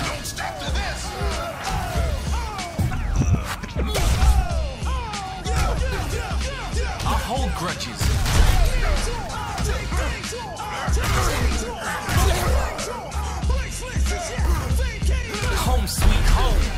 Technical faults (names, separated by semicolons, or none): none